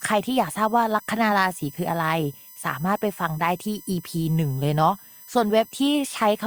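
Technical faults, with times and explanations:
Throughout, USB whine: a thin, fixed-pitch whine runs under the speech for the whole clip. It is built on a 1 kHz tone with a stack of harmonics, the strongest at 14 kHz, and sits roughly 25 dB below the speech. The bus draws current in 1 ms frames, and those regular pulses leak through shared power or ground into the audio path, producing a steady tone at 1 kHz and its multiples.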